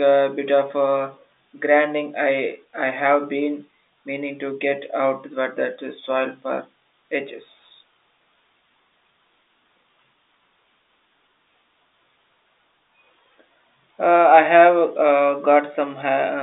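Nothing goes wrong anywhere in the recording; the speech simply has the narrow, boxy sound of an ordinary telephone line, with the band running from about 250 Hz up to about 3.7 kHz, which fits standard G.711 telephone coding.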